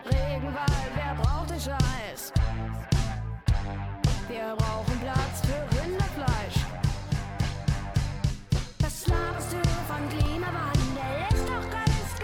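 At 4.27 s and again at 10.26 s there is an overlap between stream segments. Timestamps on neighbouring chunks, spaced about 6 s apart, clash, and a sliver of real audio is dropped. Each is heard as a tiny skip, a step in the waveform, and a thin vertical broadband line on a spectrogram.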